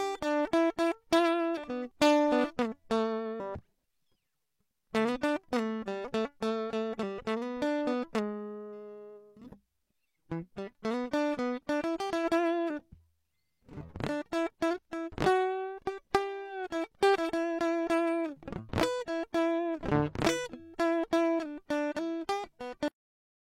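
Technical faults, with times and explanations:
22.88 s, cut-off end: the music stops abruptly in the middle of a sound and falls straight to digital silence for the final half second, with no decay or release tail. The last stretch of audio was never written out, so the signal simply ends. This is unlike a deliberate fade, which tapers, or a dropout, where the sound would resume; here nothing returns after the cut.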